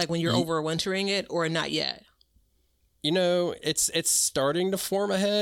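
No technical faults are audible.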